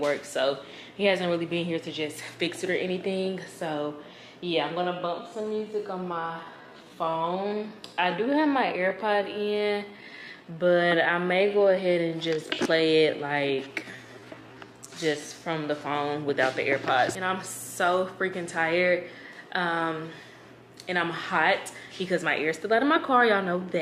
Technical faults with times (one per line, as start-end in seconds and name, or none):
4.76-15.64 time-stretched section